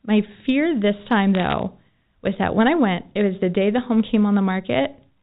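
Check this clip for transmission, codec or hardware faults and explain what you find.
Two kinds of fault are present: hard clipping in two places and a burst of bit errors on the digital phone line. The G.711 A-law telephone coding itself contributes only faint quantisation noise under the speech.

Hard clipping occurs from 0.18 to 0.51 s and again briefly at 4.14 s, just after "the day the home". The level exceeds what the stage can pass by about 1 dB, so peaks are cut flat. That light overload produces brief crackle on the loudest moments rather than continuous fuzz.

Bit errors on the digital phone line appear from 1.35 to 1.59 s. Corrupted bits in the 8-bit logarithmic samples change individual sample values, with an error rate of roughly a third of a percent. Sign-bit or high-bit hits stand out as sharp ticks, heard here as a short patch of crackle over intact speech.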